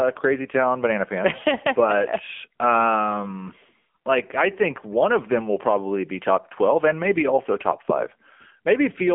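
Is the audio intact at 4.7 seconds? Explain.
No. At 4.7 seconds, as throughout the clip, the speech carries the AMR narrowband mobile codec. The content stops at about 3.5 kHz, with a telephone-style passband of roughly 200 Hz to 3.4 kHz. The codec rebuilds the voice from a vocal-tract model excited by a few pulses per 5 ms subframe, and here the damage is plainly audible: a buzzy, synthetic texture from the 7.95 kbps AMR-NB mode, around 8 kbps.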